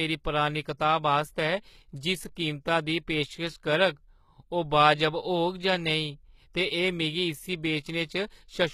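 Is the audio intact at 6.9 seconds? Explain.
No. At 6.9 seconds, as across the whole clip, the speech shows plainly audible damage, likely from HE-AAC compression. The treble is rebuilt from copied lower bands, so harmonics misalign above the crossover. S sounds turn gritty, metallic or lispy. This fits a low bitrate, near 20 kbps.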